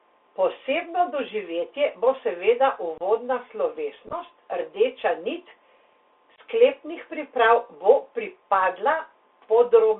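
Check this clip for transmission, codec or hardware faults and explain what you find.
Two faults are audible: narrowband Bluetooth headset coding throughout, and three brief dropouts.

Throughout, the speech sounds boxed-in and scratchy, with a grainy hiss underneath and sibilants that rasp. This is the Bluetooth CVSD headset codec. Its one-bit-per-sample delta coding lags behind fast, loud high-frequency detail, and the line band stops near 3.5 kHz.

At 2.98–3.02 s, right after "doživetje bo seveda", at 4.07–4.14 s, just before "rdeča nit", and at 6.36–6.39 s, before "sklepnih priprav", the speech drops out with hard edges. This is unconcealed Bluetooth headset packet loss. A handful of voice packets went missing and were replaced with silence or an idle pattern rather than patched over. That removes about 30 ms in the first two gaps and about 19 ms in the third. The middle gap is chopped into scattered holes over roughly 60 ms, so it sounds rough rather than clean.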